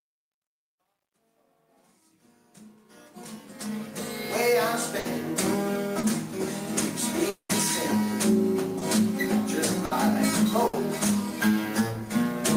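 From 0 to 4.48 s the fade shows truncation distortion: a gain stage without dither keeps too few bits, which fits about 11-bit resolution, so the low-level waveform collapses into coarse steps. It is grittiest from 0 to 2.85 s. Unlike noise, the grit follows the signal.

At 4.99 s, 9.85 s and 10.67 s a burst of packet loss leaves 60 ms gaps, each filled by continuing the last sound and turning it down, so the sound then jumps ahead.

At 5.99 s (40 ms) and 8.79 s (20 ms) short concealed packet loss produces only a brief smear or wobble before blending back. These gaps are shorter than the bursts.

From 7.29 to 7.51 s a 200 ms stretch is missing: the last sound is carried on and fades, then about 80 ms of silence follows before the audio resumes further on. This is likely a long network dropout, and the silence sets it apart from the shorter bursts.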